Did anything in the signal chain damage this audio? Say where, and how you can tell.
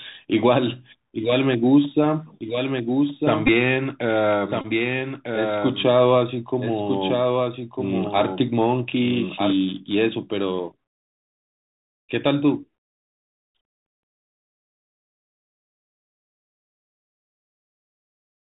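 Yes. The Bluetooth CVSD headset codec colours the whole clip at the codec stage: nothing above 4 kHz survives, s sounds are scratchy, loud high content distorts, and a granular hiss sits under the speech. These are signs of a one-bit, 64 kHz delta stream whose adaptive step cannot keep up.

A doubled audio track runs from 2.41 to 9.53 s. A second full-band copy trails about 1.5 s behind, roughly 5 dB quieter, with no room colour, and it starts and stops abruptly. The likely cause is a second, slower capture path or an edit holding two offset copies.

Bluetooth headset packets are repeated on the radio link at 3.47 s, from 4.61 to 4.66 s, and at 10.80 s. Each dropout was filled by re-decoding the previous 3.75 ms packet, which produces a buzz near 267 Hz. The longest run fits roughly seven lost packets.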